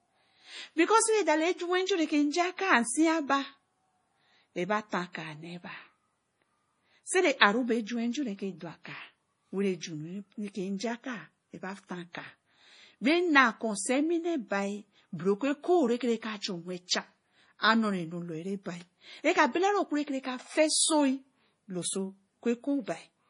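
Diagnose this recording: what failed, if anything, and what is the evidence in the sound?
The codec stage is where this went wrong, and it's the whole 23-second speech clip. Nothing comes through above 10.5 kHz, a hard treble cut with no natural roll-off, and the damage is heavy: watery, swirly texture where quiet spectral detail keeps dropping in and out between frames. That points to MP3 compression, likely at a starved bitrate that fits something around 32 kbps, where the encoder lops off the top band and zeroes weak lines to save bits.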